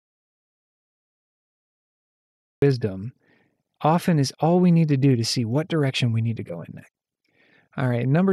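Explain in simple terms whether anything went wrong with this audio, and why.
Yes, something went wrong right at the start. The recording was already in an audio dropout to silence when the clip begins: the input was likely cut off, through a disconnected device, a failed link or a mute, while the recorder kept writing silence. So the first 2.62 seconds are complete, dead silence, with not even the faint background hiss of the room, and then the speech suddenly appears mid-flow. Anything said during that gap is lost.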